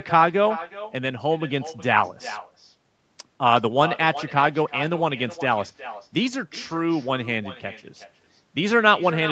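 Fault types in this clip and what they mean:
Echo with no canceller: the far end is playing the call through a loudspeaker, its microphone picks that up, and nothing strips it out, so the speech returns after the network round trip. Throughout, each phrase is trailed by a thinner copy about 13 dB quieter, arriving roughly 0.4 s later.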